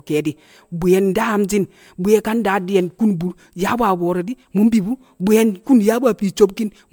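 From start to finish the speech has a swirly, smeared and hollow quality. Consonant attacks are blurred. The texture sounds worse than a single MP3 pass at a rate like 128 kbit/s would explain. The likely cause is generation loss: repeated decoding and re-encoding, around seven times over. Each pass quantises again on a shifted frame grid. Noise and spectral gaps pile up. Nothing is present above 20 kHz.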